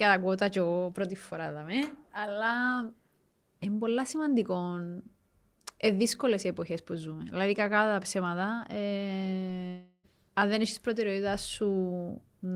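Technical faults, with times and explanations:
9.67 to 10.06 s, long network dropout: the speech turns into a fading buzzy smear of the last sound for about 0.36 s, goes briefly silent, then resumes with a chunk skipped, likely because the audio for that stretch never arrived in time.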